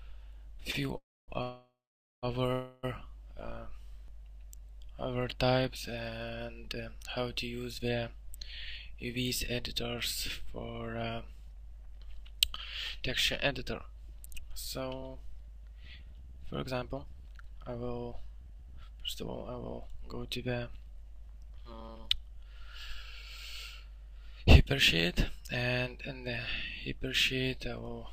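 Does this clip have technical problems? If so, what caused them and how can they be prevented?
Yes. At 0.71 to 0.76 s there is a short stall from a late packet. The last sound is held about 23 ms too long, then resumes at the same point. Nothing is lost. A slightly deeper jitter buffer would absorb such small delays.

Three call audio freezes follow, at 0.98 to 1.30 s, 1.42 to 2.25 s and 2.53 to 2.85 s. Each holds the last sound, which fades. The first two fall silent for about 0.26 s and 0.51 s. The likely cause is packets held up in transit, emptying the jitter buffer. A steadier network path with prioritised traffic would prevent them.

A jitter buffer speed-up runs from 8.56 to 11.87 s at 108% speed, and from 12.70 to 22.45 s at 112%. The pitch stays the same, but the sound is hurried. Short pitch-period pieces are cut to shed excess buffered delay, about 0.3 s and then about a second. 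Avoiding bursts of delayed packets, or draining the excess more gently, would prevent this.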